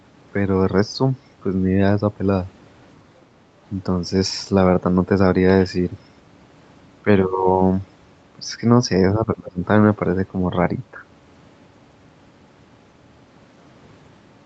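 Speech passed through a call chain where the echo canceller most likely lost track during double talk, mistaking the near talker for loudspeaker echo and suppressing it. The result is speech suppressed in double talk from 9.18 to 9.62 s: the voice dips sharply, by around 25 dB at its deepest, over roughly 0.4 s in total. Throughout, the call path's band limit leaves nothing audible above 8 kHz.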